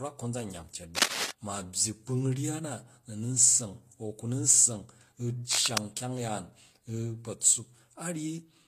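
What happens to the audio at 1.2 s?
A dense, uneven scratching and rustling sits over the speech from 0.95 to 1.31 s, at about the same level as the speech itself. This is cable scratch noise, likely from a worn cable, connector or control being moved so that its contact resistance jumped around rapidly.

Underneath, and throughout the clip, the speech has two kinds of compression artefact layered together, and nothing above 14.9 kHz. That points to transcoding between lossy codecs, likely a low-bitrate HE-AAC encode later re-encoded as Vorbis.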